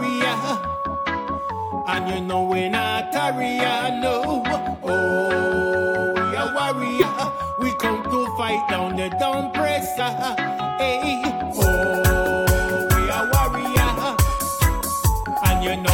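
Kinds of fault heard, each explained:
Compressed frames skipped: at 1.98, 6.99 to 7.03, 9.99, 11.24 and 15.44 s the audio jumps ahead, losing roughly 50 or 20 ms each time as whole coded frames go unplayed.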